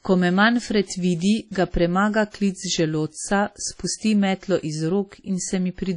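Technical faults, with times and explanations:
Throughout, WMA compression: the speech has a ringing, washy smear and a hiss that breathes with it, and nothing survives above 10.1 kHz. Likely a transform codec at around 32 kbps, spreading quantisation noise across long blocks and zeroing weak detail.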